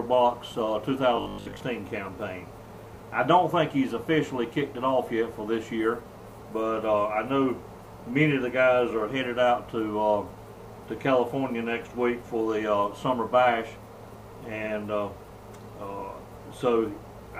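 Likely starved of fresh input, the playback path kept looping its last short buffer from 1.16 to 1.60 s, replaying roughly two thirds of that stretch instead of the real audio. The result is robotic sound from repeated short buffers, a rigid 50 Hz buzz that fits a 20 ms buffer.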